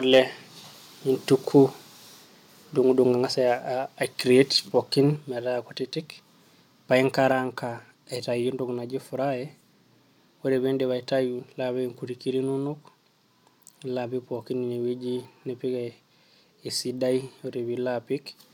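From 0.13 to 0.19 s the speech peaks press flat against the converter's limit, sounding harsh and crackly. This is microphone overload, likely from input gain set about 3 dB too high, so a small fraction of samples are clipped. The waveform shows squared-off tops, and the spectrogram shows brief broadband smearing.

At 5.16 s, between "aicreat pooikn" and "nintaa kutitik", the voice and the background drop together by about 4 dB, and at 7.32 s they drop by about 3 dB more. This is a microphone volume step-down, likely automatic gain control lowering the input level. Each drop shows as an abrupt step in the waveform envelope and a uniform dimming across every band of the spectrogram.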